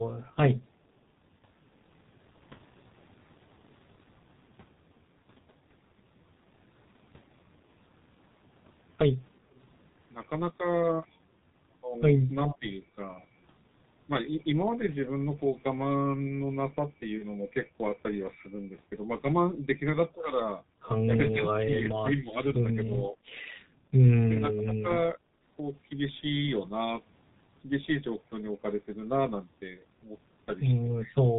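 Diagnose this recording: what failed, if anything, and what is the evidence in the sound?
Codec stage: the speech was coded with G.723.1, at a rate consistent with about 6.3 kbit/s. Nothing above 4 kHz survives, so the voice sounds muffled and hoarse, with smeared consonants throughout.

Network stage: VoIP packet loss concealed by the speech codec occurs at 17.18–17.26 s, fitting one lost 30 ms frame. The decoder extrapolated, producing a brief, fading smear.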